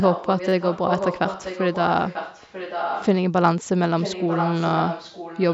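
A speech recording in which a second, fainter copy of the talking trails the original by about 940 ms. From 0.0 to 3.07 s it sits about 5 dB below the direct sound, and from 3.99 to 5.54 s it drops to about 10 dB below. This is an echo leak, likely caused by the far end playing the call over a loudspeaker while its echo canceller failed to fully remove what its microphone picked up, so the residue was sent back down the line. Between 0.49 and 0.52 s there is a brief buzzy stutter. This is a repeated buffer: fresh audio arrived late, so the same slice of about 10.7 ms was played three extra times back to back, with a hard join at each repeat. The slice length fits a 512-sample buffer, and because the segment is so short the repeats fuse into a buzz rather than an audible word stutter. The call microphone processing leaves nothing above 8 kHz.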